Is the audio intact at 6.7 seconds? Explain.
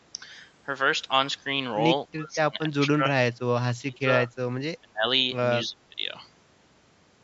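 Yes, at 6.7 seconds the speech is intact, with only the normal narrowing from call microphone processing, which leaves nothing above 8 kHz.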